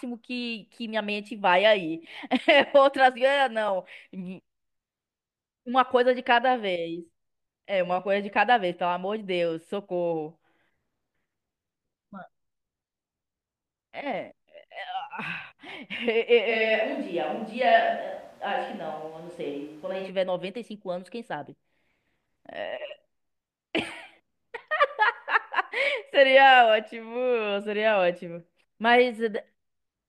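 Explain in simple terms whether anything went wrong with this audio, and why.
From 16.51 to 20.08 seconds, the speech suddenly turns hollow and roomy. It sounds thinner, though no quieter. Then it snaps back. The likely cause is a switch to a distant microphone, one further away that picks up more of the room.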